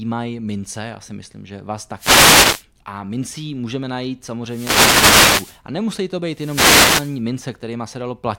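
Wireless microphone noise hits at 1.96 to 2.65, 4.45 to 5.61 and 6.30 to 7.22 s: the FM radio link fades and receiver hiss swishes over the speech.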